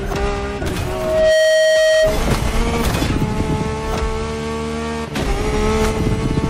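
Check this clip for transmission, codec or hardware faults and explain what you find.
One fault is present: loudspeaker feedback squeal from 0.85 s to 2.23 s. A microphone is picking up the loudspeaker it feeds, and at 632 Hz the loop gain exceeds one. That tone swells over roughly half a second into a steady squeal, ending a few decibels above the programme audio.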